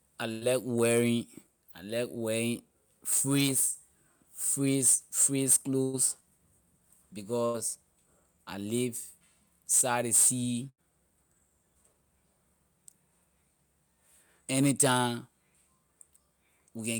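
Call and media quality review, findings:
Burst of packet loss, four events: 0.31–0.44 s (just before "wearing I like wearing"), 5.83–5.96 s, 7.45–7.59 s, 10.69–10.83 s (just after "side ley sea"). Receiver-side concealment. Last sound extended as buzz/hiss for about 100 ms (first two) and 85 ms (last two), then resumes with 60 ms of audio skipped. Spectrogram: frozen, flat harmonics fading out, then a hard onset. Waveform: repeating decaying cycles.

Jitter buffer speed-up, three events: 1.47–1.63 s (before "I like wearing"), 8.57–8.83 s, 11.75–11.94 s. Playout at 119%, 111% and 118% speed, around 40 ms trimmed each, as the buffer drains excess delay. Pitch unchanged, sound rushed. Spectrogram: harmonic spacing constant, syllables compressed in time. Waveform: whole pitch periods cut out.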